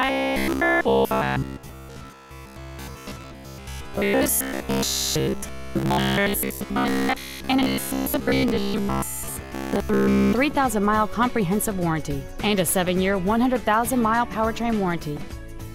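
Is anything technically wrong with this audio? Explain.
Yes. From 0.02 s to 10.33 s there is robotic sound from repeated short buffers. The likely cause is audio arriving too rarely, so the playback side keeps replaying its last short slice instead of the real material, and most of the audio in this stretch is these repeats. The loop rate forces a steady buzz at 66.7 Hz, which fits a slice about 15 ms long. This gives the sound a rigid, metallic drone that only loosely tracks the underlying audio.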